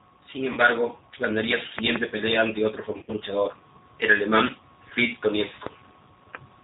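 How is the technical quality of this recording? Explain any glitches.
The recording is intelligible but technically poor: coded speech throughout, three dropouts, and one loud pop.

The G.729 codec damage is plainly audible across the whole clip. The sound is band-limited with nothing above 4 kHz, and slightly rough and synthetic, which fits 8 kbit/s G.729. It rebuilds speech from a vocal-tract filter, a pitch predictor and a few pulses per frame. Unlike simple low-pass filtering, this adds a buzzy, artificial texture, not just dullness.

VoIP packet loss concealed by the speech codec occurs at 0.53–0.59 s (about 40 ms missing), 2.92–3.12 s (about 120 ms lost, scattered across 160 ms, longest gap 50 ms) and 4.47–4.52 s (about 20 ms). Each time, the decoder stretches its last pitch and filter into a fading buzzy tone or coloured noise. Unlike clean dropouts to silence, the sound smears and stays weak briefly after packets resume.

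A loud pop lands at 5.66–5.69 s, roughly 20 dB above the speech. A single sharp transient sits on top while the speech continues underneath, likely from an electrical step such as a switch or static discharge. Unlike packet loss, nothing is missing or smeared.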